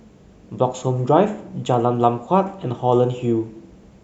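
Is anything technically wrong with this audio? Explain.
Yes. From 0.12 s to 4.01 s there are clock slip clicks. They are faint, regular ticks, about ten per second, some forty in total. They likely come from two unsynchronised clocks drifting by roughly 200 ppm. Each slip drops or repeats one sample.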